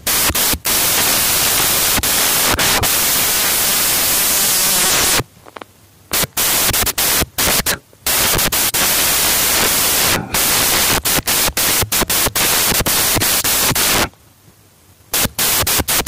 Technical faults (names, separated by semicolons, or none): samples built from the wrong bytes